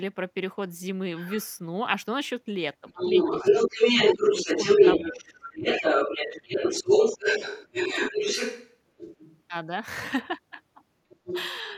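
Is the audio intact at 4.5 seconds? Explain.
No. From 2.88 to 9.42 s there's other side's voice leaking through, sitting roughly 10 dB above the talker. The likely cause is a loudspeaker on the talker's end feeding back into the mic, with the echo canceller failing to strip it out.

Right around that point, between 4.42 and 4.47 s, there's also speech suppressed in double talk: the talker's level briefly dips by about 5 dB for a few tens of milliseconds. That's likely the echo canceller ducking everything while both sides overlap.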